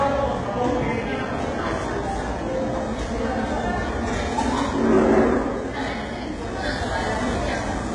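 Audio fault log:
Throughout: HE-AAC compression, likely. Synthesized treble is copied upward from lower bands, sounding gritty and metallic, with nothing above 11 kHz. The low bitrate fits around 12 kbps. Plain lowpassing would sound dull rather than bright.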